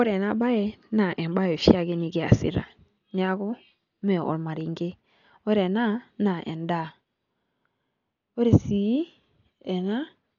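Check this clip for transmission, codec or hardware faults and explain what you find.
One codec fault runs through the whole speech clip, likely Dolby Digital compression at a starved bitrate, around 48 kbps judging by the damage. The encoder dropped everything above 7 kHz and left many frequency lines without mantissa bits, so the decoder filled them with dither noise. The speech sounds dull, with a rough, fluttering noise around its tones.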